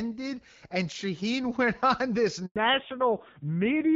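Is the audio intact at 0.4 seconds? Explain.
Yes, the speech is intact at 0.4 seconds, with no dropout, click or distortion there, just the clear, band-limited sound of AMR wideband (HD Voice) coding at 12.65 kbit/s.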